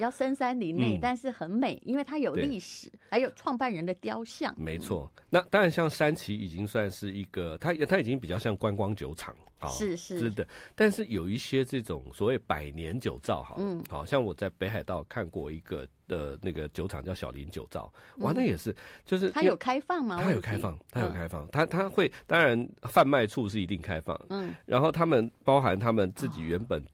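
A speech recording in which no technical fault can be heard at any point in the signal.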